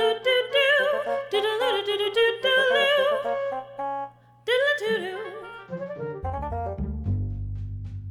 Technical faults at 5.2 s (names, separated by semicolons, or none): none